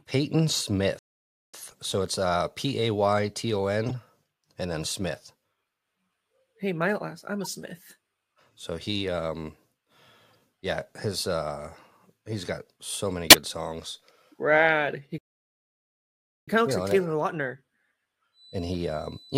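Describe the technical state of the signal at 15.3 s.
At 15.3 s the signal is inside a playback stall running from 15.18 s to 16.48 s. The player most likely ran short of incoming data, or its playback thread was held up, so nothing reached the output for about 1.29 s. The result is a hard silence cutting into the speech mid-flow. The sound then picks up again with "kind of looks you", resuming after the gap.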